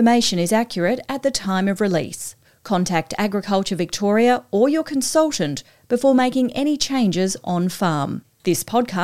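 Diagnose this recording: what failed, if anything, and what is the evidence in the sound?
Two isolated sharp clicks at 5.46 s and 8.49 s point to dropped samples, likely in the driver or buffer stage: a couple of samples vanish and the waveform jumps.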